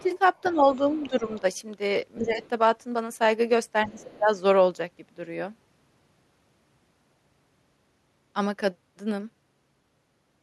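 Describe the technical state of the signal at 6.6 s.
The audio is intact at 6.6 s, with no fault present at that moment.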